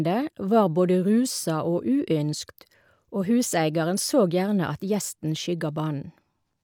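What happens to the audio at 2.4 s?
Nothing goes wrong at 2.4 s; the speech carries on intact through that moment, with no dropout, click or distortion.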